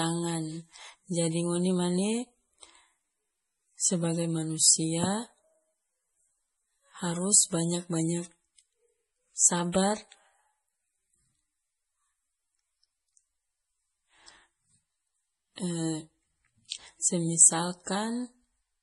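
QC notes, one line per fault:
Throughout, MP3 compression: nothing is present above 11.4 kHz, and the heavy watery, swirling texture points to a low bitrate near 32 kbps. The likely cause is an encoder short of bits that cuts the treble at a fixed point and switches weak frequency lines on and off between frames.
16.68 to 16.72 s, pre-echo: a brief hiss of about 34 ms runs ahead of a sharp attack, which sounds softened. The codec spreads its quantisation noise across the whole block, so noise sized for the loud onset also fills the quiet moment just before it.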